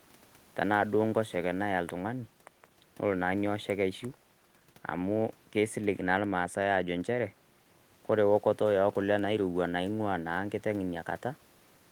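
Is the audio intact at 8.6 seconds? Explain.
Yes, the audio is intact at 8.6 seconds, with no audible fault at that point.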